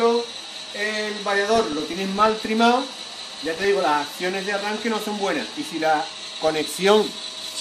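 Across the whole clip the sound is dull, with a plainly audible gurgling, granular texture, most likely MP2 compression at a low bitrate, consistent with roughly 80 kbps. Layer II divides the signal into 32 equal sub-bands and shares out a small bit budget, so upper bands drop out and flicker while the remaining ones are coarsely quantised. Because it is constant rather than bursty, it is distinguishable from reception damage, and it lacks the metallic swirl typical of MP3 artefacts.

DAB burbling appears in three bursts: 1.56 to 2.45 s, 3.23 to 3.65 s and 6.23 to 6.58 s. These fit a bit error rate of a small fraction of a percent. Errors slip past the error correction into the MP2 data, so corrupted samples throw short noise blips into individual sub-bands. Unlike the steady codec dullness, these arrive in distinct patches and then stop.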